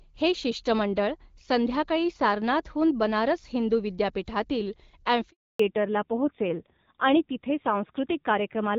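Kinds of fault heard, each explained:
Handover gap: at 5.30 s the speech fades out within a few tens of milliseconds and stays silent for 300 ms until 5.60 s, as the call switches between networks and no speech frames reach the receiver, so whatever was said then is lost.
Fallback to narrowband: from 5.60 s to the end the call leaves HD Voice and continues on an older narrowband codec, which fits AMR-NB at 7.4 kbit/s. Nothing is left above 4 kHz, so the speech turns duller and rougher.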